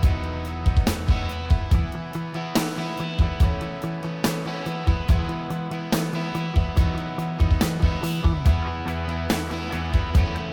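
No technical faults can be heard at any point in the clip.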